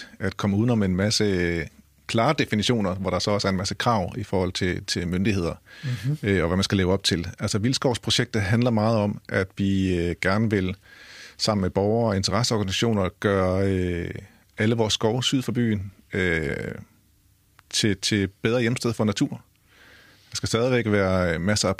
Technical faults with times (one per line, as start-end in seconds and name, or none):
none